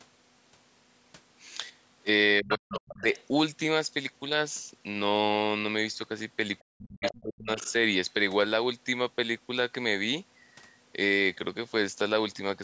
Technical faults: speech suppressed in double talk; other side's voice leaking through

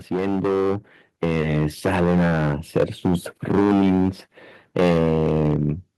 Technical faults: hard clipping; automatic gain rising

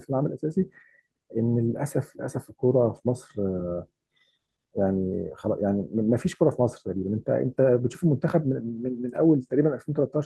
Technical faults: clock drift between sender and receiver; repeated timing corrections

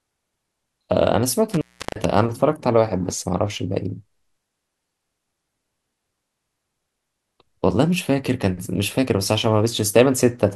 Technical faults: intermittent contact

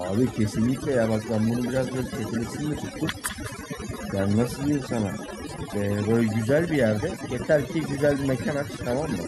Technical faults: overdone noise removal; echo with no canceller

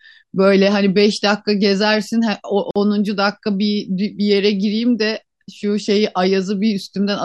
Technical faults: gap at a join of encoded pieces

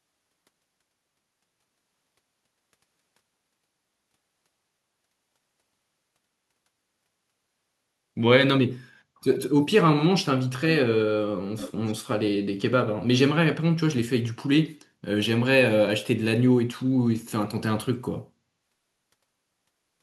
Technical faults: echo leak

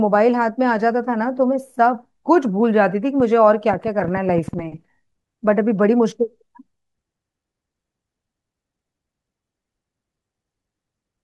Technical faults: train of clicks

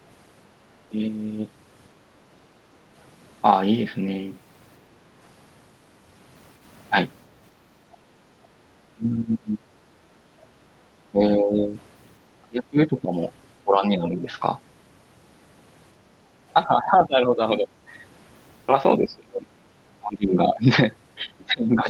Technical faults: background gated by the echo canceller; speech suppressed in double talk

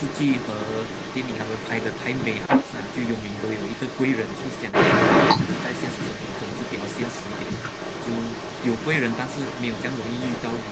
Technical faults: echo leak

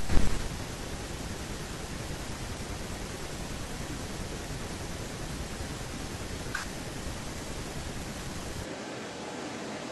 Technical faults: compressed frames skipped; switch to a distant microphone

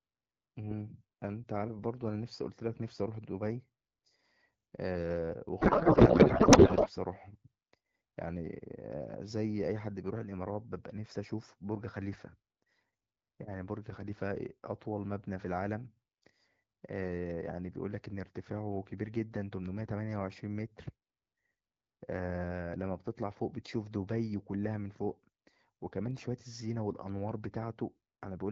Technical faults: codec payload misread

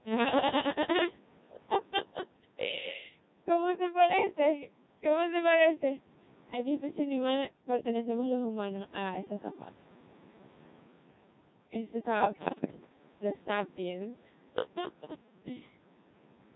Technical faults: Codec 2 vocoder; bit errors on digital voice radio

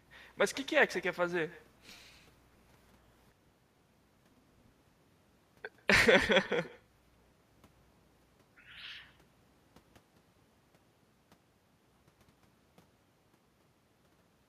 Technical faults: echo with no canceller

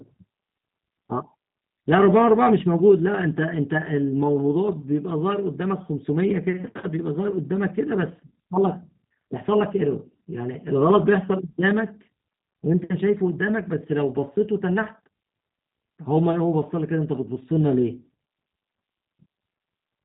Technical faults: G.729 codec

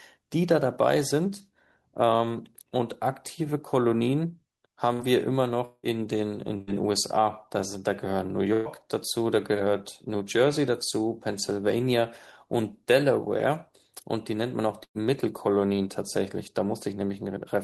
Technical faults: burst of packet loss; long network dropout

